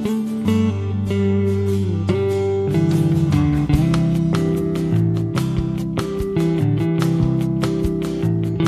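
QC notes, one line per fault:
No fault found.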